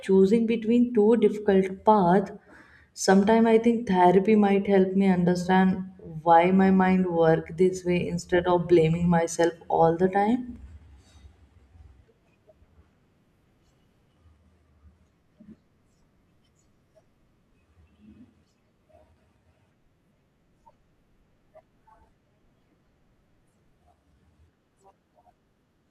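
No technical faults can be heard anywhere in the recording.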